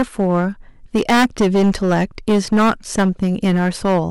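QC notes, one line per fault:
throughout: hard clipping. Every loud syllable carries a harsh, buzzing fuzz rather than occasional crackle, because the speech is driven about 15 dB past what the stage can pass. Around a tenth of the samples hit the ceiling and are sliced flat, and those squared-off peaks throw energy into high harmonics that were never in the voice. That is the gritty edge that sits on top of the sound through all of the speech.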